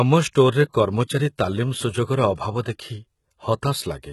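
HE-AAC compression throughout: nothing above 11.8 kHz, and s sounds are gritty and metallic, likely from treble rebuilt by spectral band replication at about 16 kbps.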